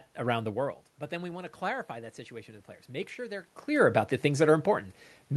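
From 1.1 s to 3.51 s there is automatic gain rising. The speech had dropped by about 15 dB at the microphone after the talker moved back, and the gain control responds by slowly lifting its level by about 3 dB, with the voice and room noise swelling together until just before "clear about the". On a waveform the envelope climbs gradually over those two and a half seconds, and a spectrogram shows the noise floor brightening across all bands along with the speech.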